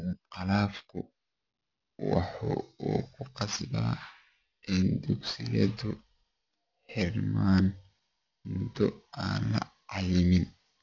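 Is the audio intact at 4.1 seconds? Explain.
No. At 4.1 seconds, as throughout the whole clip, the speech carries aliasing. Content above 6 kHz folds back below that edge, which fits an unfiltered downsample to 12 kHz. The folded energy sits roughly 20 dB under the speech, making sibilants gritty and metallic.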